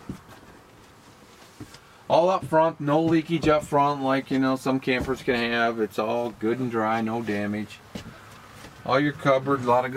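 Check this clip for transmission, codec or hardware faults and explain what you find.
Nothing in the audio points to a fault at any point along its path. There is no event in it that needs tracing to a cause.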